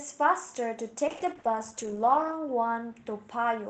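A call bitrate drop runs from 1.08 to 2.97 s and sits at its lowest for 1.27 s. The call's bandwidth estimate fell, so the Opus encoder coded the speech far more coarsely, leaving it rough and watery. This fits a fall from about 32 to 12 kbps.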